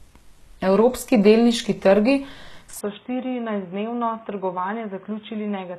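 HE-AAC compression runs through the whole speech clip. The band stops at 12.3 kHz, and the upper range has the gritty, metallic edge of treble that was rebuilt rather than coded: spectral band replication copies lower bands upward and shapes them coarsely, so its harmonics don't line up with the real ones below. The damage is plainly audible, which fits a very low bitrate around 16 kbps, likely with HE-AAC.

An input switched to a poorer device at 2.8 s, and the change lasts to the end. There is no gap at the join. The sound narrows abruptly to nothing above 3.8 kHz and turns dull and boxy. The level drops by about 10 dB, and a new noise floor appears roughly 30 dB below the speech. The recording was likely moved mid-stream onto a lower-grade microphone or a headset call profile.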